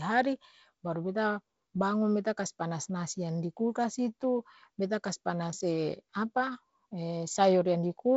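Speech, with no technical faults to report.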